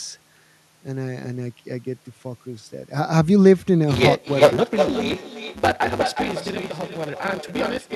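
Block size mismatch (truncated) runs throughout this speech: each written block, which fits a 512-sample size, loses its tail, leaving a 150 Hz buzz and speech hurried 1.6 times at near-normal pitch. Echo with no canceller is also present throughout: the far end's loudspeaker feeds its microphone, returning a thinner copy about 6 dB quieter, roughly 400 ms behind.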